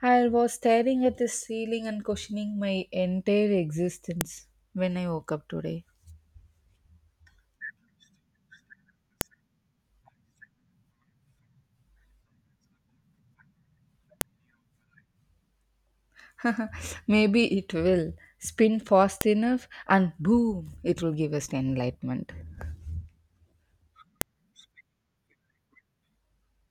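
File header played as audio at 4.21, 9.21, 14.21, 19.21 and 24.21 s: 5-second speech pieces joined with headers intact, so header bytes snap sharply, as before "when I woke up".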